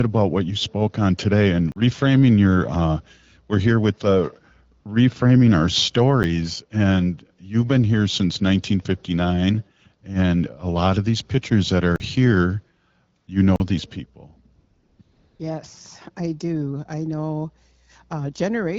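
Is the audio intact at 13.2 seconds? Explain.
No. From 13.17 to 13.27 s, AMR comfort noise replaces the real signal. The phone judged this 100 ms silent, stopped sending speech frames, and the receiver synthesised a steady, smooth hiss. On a spectrogram it shows as a flat, featureless band, and on the waveform as an even, low-level stretch.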